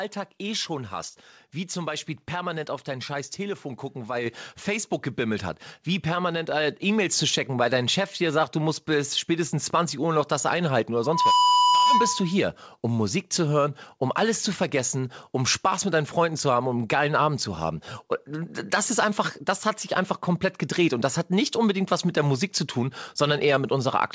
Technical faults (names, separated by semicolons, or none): microphone volume stepped up; loudspeaker feedback squeal